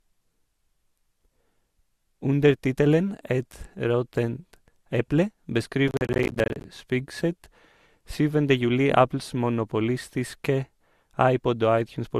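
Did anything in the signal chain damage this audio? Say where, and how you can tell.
Yes. At the codec stage, the whole clip shows signs of likely transcoding between lossy codecs: nothing survives above 15.6 kHz, and the speech carries two layers of artefacts at once. There is MP3-style smearing around transients alongside Opus-style band texture, which fits an MP3 at around 107 kbit/s re-encoded to Opus at 48 kbit/s. A single encode would show one artefact family. This one stacks them, and it keeps the lowest cut-off in the chain.

At the driver or buffer stage, processor overload crackle runs from 5.88 to 6.64 s. It is a gritty burst of dropouts in which each missed buffer, roughly 10 ms long, is left as silence, and there are around forty of them, each with hard edges. A network dropout would sound different. It gives isolated gaps or concealment smoothing, not a dense stream of short silences like this that stops once the load clears.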